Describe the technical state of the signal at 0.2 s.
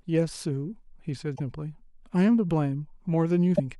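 At 0.2 s the speech signal is intact, with no audible dropout, distortion, clipping or other fault at that point.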